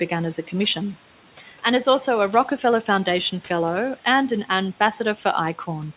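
Noise suppressor artifacts run through the whole speech recording: the suppressor pulls steady background down by about 12 dB frame by frame, so the residue pumps between phrases. Speech cut by the noise suppressor occurs from 5.16 to 5.25 s, where the suppressor mistook quiet speech for noise and dipped it by up to about 10 dB, leaving that moment swallowed and faint. The room noise sits about 19 dB below the speech, and nothing is heard above 4 kHz, which fits a narrowband call codec.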